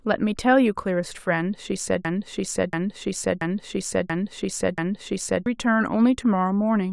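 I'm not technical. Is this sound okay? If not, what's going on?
No. From 2.05 to 5.46 s there's a system hang loop: the computer froze, so the same 0.68-second snippet of speech replays exactly, about five times, and roughly three seconds of real speech is lost. Unlike an echo, each repeat is identical and never fades.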